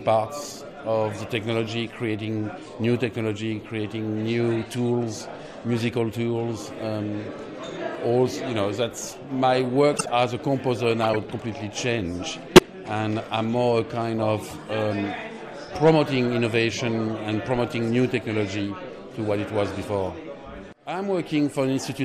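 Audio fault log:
9.94–10.09 s, 11.02–11.16 s, 12.56–12.62 s, 14.47–14.53 s: corrupt frame decoded. Damaged compressed frames were played as if valid, so misread gains and codes put energy at the wrong frequencies for each run of a few frames. The result is short chirping, squeaky noise bursts, near full scale at 12.56 s, around -10 dBFS at 9.94 and 11.02 s, and much fainter at 14.47 s. Concealment of lost frames would instead leave a gap or a smeared repeat, not these foreign, unrelated sounds.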